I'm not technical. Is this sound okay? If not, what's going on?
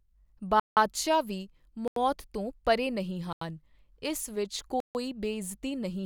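No. The speech drops out four times, each a block of digital silence. The sound stops dead. The holes are at 0.60 to 0.77 seconds, 1.88 to 1.96, 3.33 to 3.41 just after "ਤੋਂ ਪਰੇ ਨਹੀਂ", and 4.80 to 4.95 just after "ਇਸ ਵਿੱਚ". They last between about a tenth and a fifth of a second. The program recording or playing the audio probably didn't deliver its next chunk in time, so that chunk was left empty.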